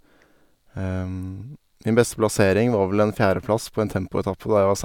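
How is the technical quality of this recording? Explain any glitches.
No technical glitches can be heard anywhere in this speech recording. There is nothing in it that calls for an explanation.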